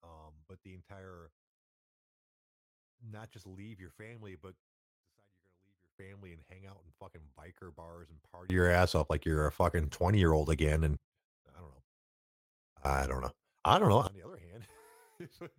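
At 4.78 s the speech drops by about 24 dB in one step, background noise included, and returns at 5.99 s. At 8.50 s and 12.85 s it jumps up by about 24 dB until 10.97 s and 14.07 s. Each is a sudden gain jump, likely from a gain change applied without a ramp.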